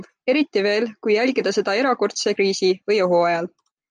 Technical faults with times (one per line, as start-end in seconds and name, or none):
none